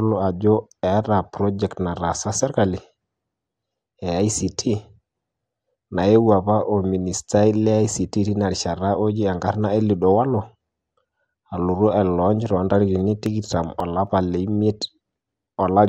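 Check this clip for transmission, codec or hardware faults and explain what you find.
Two faults are audible in this speech clip: coded-audio degradation throughout, and a short burst of ticks near the end.

MP2 compression runs through the whole clip and is the likely cause of the dull, gurgling, granular texture. Starved of bits, the 32 sub-bands lose their upper bands, which flicker in and out. The damage is plainly audible, consistent with a rate around 80 kbps.

CD scratch ticks occur from 12.99 to 14.07 s. There are five brief clicks, each roughly a millisecond or less, at about five per second. A blemish recurring once per disc revolution defeats error correction, and the player patches the lost samples.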